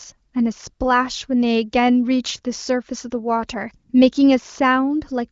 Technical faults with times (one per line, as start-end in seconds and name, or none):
none